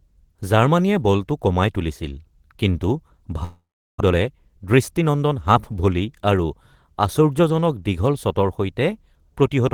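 Right after "বলটো কমাই তুলিছিল কিন্তু", at 3.43 s, the speech breaks off until 4.02 s: the last sound smears into a fading buzz, then goes quiet, and returns with a chunk missing. That's most likely a long network dropout, with the receiver covering the gap it never got.

From 4.12 to 5.56 s you get a jitter buffer speed-up. The receiver trims tiny pitch-period slices to shed roughly 150 ms of backed-up delay, so the speech runs about 110% fast at unchanged pitch and sounds a bit rushed.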